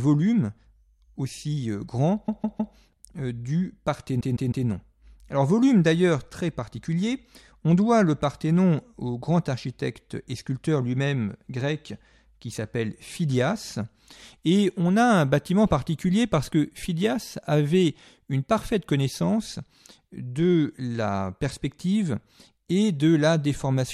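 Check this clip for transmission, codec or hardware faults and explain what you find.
Two faults of one kind turn up in this speech clip. Repeated frames occur at 2.26 to 2.73 s and at 4.19 to 4.66 s: a 157 ms block of compressed audio, consistent with a run of about six frames, was delivered again and plays three extra times, stretching each spot by 470 ms. Each sounds like a rapid stutter.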